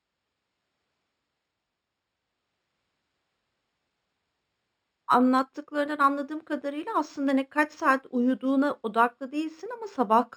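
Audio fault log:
Throughout, imaging from linear upsampling: the top of the band is dulled, and faint mirrored copies of the speech spectrum sit above it, the first between 6 and 12 kHz at roughly 35 dB below the signal. This fits a 12 kHz stream raised to 44.1 kHz by joining samples with straight lines. Plain low-pass dulling has no such copies. The images follow each sibilant's shape, heard as a light metallic shimmer rather than the unrelated, inharmonic tones of aliasing.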